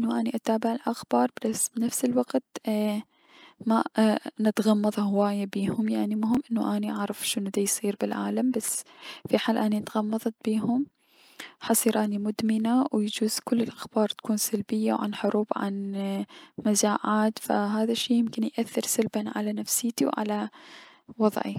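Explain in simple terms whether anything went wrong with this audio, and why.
A brief stutter sounds at 6.35 to 6.37 s, just after "نتغمض هواية بيهم يعني". This is a Bluetooth stutter: about 23 ms of data arrived late or never, so the receiver replayed its last scrap of sound, which fits a single lost packet.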